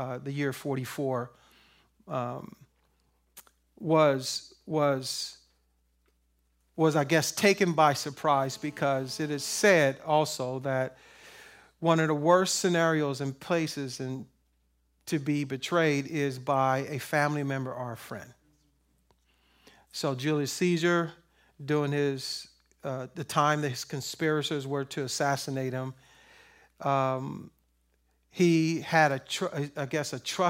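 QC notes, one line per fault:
8.32–9.70 s: GSM phone buzz, a hard, raspy tone sitting about 28 dB below the speech, pulsing at 217 Hz and stacked with dense harmonics that have nothing to do with the talker. A nearby 2G handset was transmitting its bursts 217 times a second, and the audio circuitry rectified those radio pulses into an audible pulse train. The buzz holds steady for its full 1.4 s, which points to the phone being on a call.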